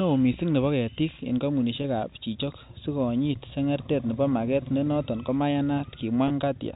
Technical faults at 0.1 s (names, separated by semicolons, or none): none